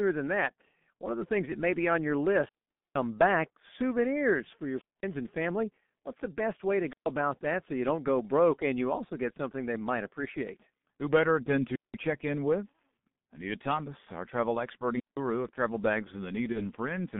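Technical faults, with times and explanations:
Throughout: G.723.1 codec. The speech sounds muffled and hoarse, with smeared consonants. Heavy low-bitrate coding near 6.3 kbit/s keeps only a narrow 150 Hz to 3.6 kHz band, and a slowly updated vocal model in 30 ms frames blurs fast articulation.
2.35–3.06 s, 4.71–5.10 s, 6.86–7.10 s, 11.65–11.99 s, 14.93–15.19 s: wireless microphone squelch dropout. Each one starts with a swell of hiss, then comes a near-silent hole lasting from about 130 ms up to about 470 ms, and then the speech comes back. The FM radio link faded far enough for the receiver's squelch to mute its output. The fourth falls between "better than" and "check in", and the fifth between "our travel expert" and "of travel bags".
16.52–16.61 s: VoIP packet loss concealed by the speech codec. Just after "of travel bags" the sound is briefly stretched and fades, and the speech stays weak for a moment afterwards. 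One 30 ms frame went missing, and the decoder filled the gap by extending the last pitch and filter at falling gain, so the frames after it took time to recover.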